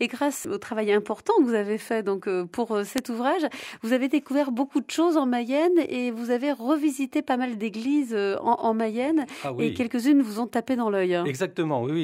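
There are four bit error spikes: 2.98 s, 6.76 s, 9.22 s and 10.54 s. Each is a single sharp tick, broadband and unrelated to the surrounding audio, as if a bit flipped on a digital link or in memory and knocked a sample's value by a power of two before it snapped back. The first is loud, peaking around -5 dBFS. The others peak near -35, -23 and -17 dBFS. Their brevity fits one to three corrupted samples each.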